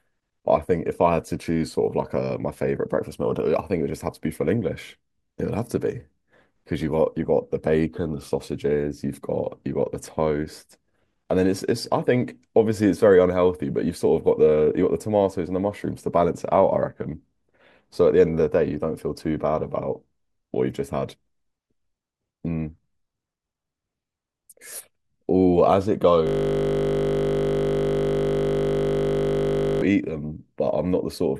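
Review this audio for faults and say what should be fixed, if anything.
From 26.27 to 29.82 s there is a system hang loop: the host froze while the sound hardware kept replaying one 20 ms buffer, turning the speech into a steady 50 Hz buzz. To prevent it, have the audio driver detect a stalled buffer refill and output silence instead of cycling stale data.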